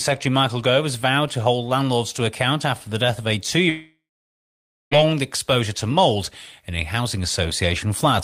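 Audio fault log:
3.69–4.93 s long network dropout: Speech becomes a brief fading buzz, then 0.9 s of silence. Likely lost packets; about 1.2 s is gone.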